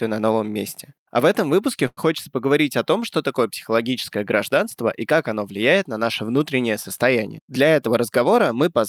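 At 1.87 s a packet failed to arrive on time and the jitter buffer ran dry, producing a short stall from a late packet. Rather than leave a gap, the receiver stretched the last stretch of speech for 97 ms until the packet turned up, then resumed exactly where it had left off, so nothing is lost but the delay grows by 97 ms. Up to 2.00 s a sound is held unnaturally long, with a faint buzzy or dipping quality.

From 7.43 s to 8.67 s the jitter buffer held more speech than its target, so it performed a jitter buffer speed-up to pull the delay back down. It repeatedly trimmed tiny slices of one or a few pitch periods, removing about a tenth of a second in total. The speech plays at 106% speed while keeping its pitch, so this stretch sounds slightly rushed.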